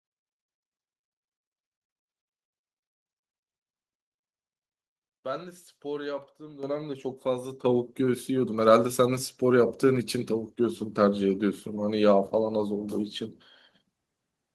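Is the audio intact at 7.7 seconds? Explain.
No. At 7.65 s the speech and the background noise behind it jump up together by about 8 dB in a single step, and the higher level then simply continues. This is a microphone volume stepped up fault: the call software judged the microphone too quiet and raised the device's input volume all at once rather than gradually. Because the gain change happens before any processing, everything the microphone picks up gets louder at the same instant.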